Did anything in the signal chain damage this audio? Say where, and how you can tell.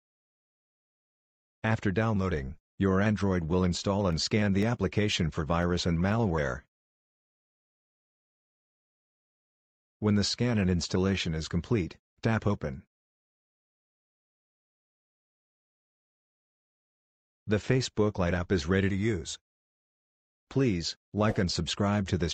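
Yes, at the driver or buffer stage. Between 4.13 and 6.12 s there are periodic USB or driver dropouts: about five tiny gaps, each around a millisecond of silence, spaced exactly 0.5 s apart. Something was stalling the USB bus or audio driver on a timer, briefly starving the stream. The strict half-second spacing, heard as regular ticks only while signal is present, separates this from random buffer underruns or crackle from a bad analogue connection.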